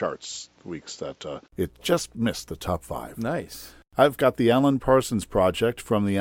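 The input likely started on a poorer device, a case of input switched to a poorer device: until 1.5 s nothing passes above 7.6 kHz, so the sound is dull, with faint hiss well below it. A 20 ms gap at 1.5 s, just before "it just missed the", marks the switch to fuller sound at much the same level.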